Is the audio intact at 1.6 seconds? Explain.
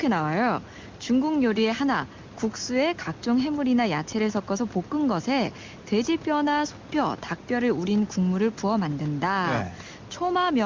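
Yes, the speech is intact at 1.6 seconds, with no fault at that moment.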